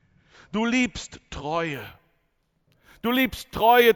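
From 1.74 s to the end of the clip, the speech carries imaging from sample-and-hold upsampling. The rate was raised from 16 kHz to 48 kHz by repeating each sample with no smoothing filter, so mirrored copies of the spectrum sit around multiples of 16 kHz. The first image fills 8 kHz to 16 kHz at about 19 dB below the signal, heard as a bright metallic fizz that tracks the speech level.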